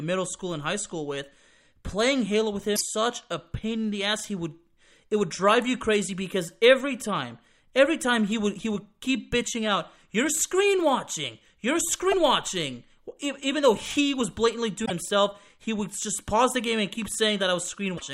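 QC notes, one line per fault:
2.73–2.81 s, 12.09–12.14 s, 14.82–14.91 s, 17.94–18.02 s: damaged data in a compressed stream. Corrupt frames make the decoder lose sync and hunt for the next header, giving a brief glitch. This is heard just before "such a" and between "though he was blatantly" and "himself he would just". A level dip would have no squawk.
3.59–3.64 s: one channel drops out. Between "such a" and "in the ass" the level falls abruptly by about 6 dB for 50 ms and then recovers, with no chirp or skip. This is likely one stereo channel vanishing before the mono sum, which halves the shared signal. Unlike stream damage, the timing stays intact.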